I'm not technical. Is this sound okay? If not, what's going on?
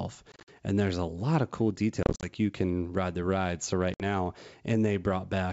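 No. Packet loss on an ADPCM call dropped bits of the speech at 0.32 to 0.49 s, 2.03 to 2.26 s and 3.94 to 4.02 s, leaving abrupt gaps of silence, each followed by a brief click or distortion as the sound recovers.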